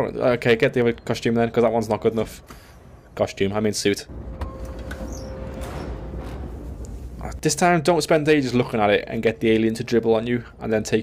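Dropped samples at 0.82, 1.68 and 7.62 s: three sharp single clicks, likely from a fraction of a millisecond missing, making the waveform jump abruptly.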